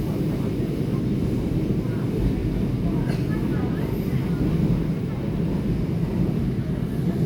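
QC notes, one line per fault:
Nothing to flag here, the audio comes across fine all the way through.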